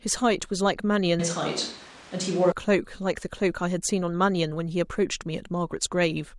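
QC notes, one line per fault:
1.20–2.52 s, switch to a distant microphone: the voice abruptly goes roomy, hollow and bass-light, with room noise about 20 dB under the speech and level roughly unchanged. Likely the close mic dropped out, leaving a farther one.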